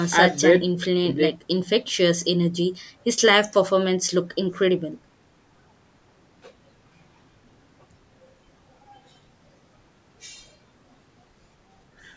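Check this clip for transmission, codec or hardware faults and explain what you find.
No transmission, codec or hardware faults turned up.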